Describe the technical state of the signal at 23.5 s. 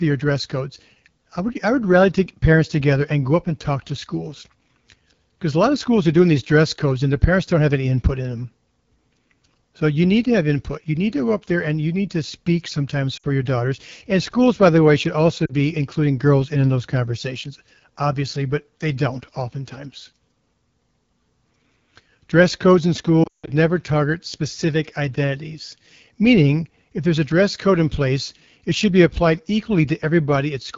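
Lost AMR speech frames run from 23.23 to 23.50 s, ending right at the moment asked, between "codes in" and "never target specific identities". About 200 ms of audio is missing across a 240 ms stretch, and the longest unbroken gap lasts 160 ms. The decoder fills each gap by reusing the last good pitch and vocal tract settings at falling gain. The sound warbles and quickly fades toward silence. It returns weak or rough for a moment at 23.5 s.

The whole clip carries the AMR wideband (HD Voice) codec. Its damage is plainly audible. The speech has a rough, raspy texture, which points to one of the codec's lowest rates, near 8.85 kbit/s. The band above 6.4 kHz is synthetic shaped noise rather than real detail. At this rate the coder has few bits for its pulse excitation. That rasp colours the recovery after the dropout.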